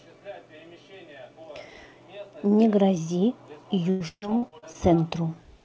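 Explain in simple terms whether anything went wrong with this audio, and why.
Between about 3.90 s and 4.76 s the speech turns choppy and robotic. That is repeated packet loss. Over that stretch, pieces of the audio arrived late or not at all, eight times in quick succession. Each hole, the longest about 0.14 s, was patched by stretching out the last bit of sound, so nearly half of that stretch is filler. The call path itself, which carries nothing above 8 kHz, is not at fault.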